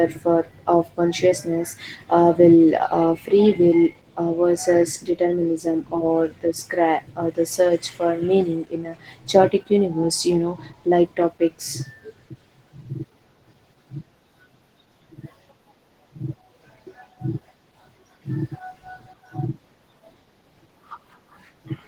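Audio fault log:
Throughout, Opus voice compression: the speech turns hoarse and slightly robotic, with coarse excitation in the predictive core. Unlike a plain low-pass, the top end is present but grainy, which fits a hybrid layer near 16 kbps.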